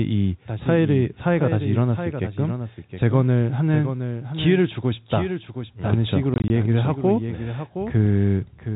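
A second copy of the signal is most likely being mixed back in through a slower capture path, so this speech recording carries a doubled audio track throughout. The duplicate trails the original by roughly 0.7 s and sits about 10 dB lower. It is full-band and dry, with no decay or room colour, so it sounds like an out-of-step repeat under the speech rather than an echo from the space. Between 6.34 and 6.5 s, packet loss filled with silence punches holes in the audio. About 80 ms of signal is missing, scattered across a 160 ms stretch. The longest single gap is 20 ms, which points to four lost 20 ms packets. Each hole is dead silence with hard edges, so that short stretch sounds chopped. The G.711 telephone coding underneath holds the band below 4 kHz, as that format does.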